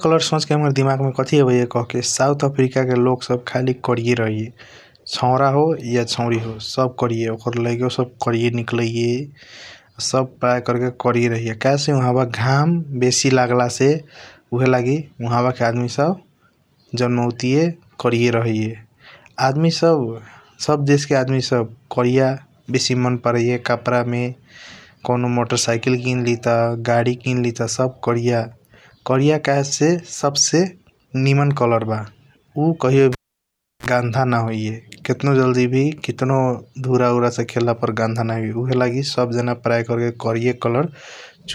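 Just after "निमन कलर ब उ", at 33.12 s, the cable is pulled and plugged in. A sharp pop opens a gap of about 0.69 s of near silence, visible as a flat waveform line. As the plug goes back and only the tip connects, a 33 ms burst of 60 Hz mains buzz appears as stacked harmonic stripes on the spectrogram. A second pop brings the speech back at 33.86 s.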